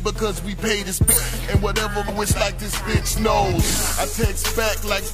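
Three short bursts of damaged data in the compressed stream break up the audio, at 1.07 to 1.14 s, 2.05 to 2.10 s and 4.97 to 5.03 s, each a brief disruption where the decoder misreads corrupted frames and resynchronises.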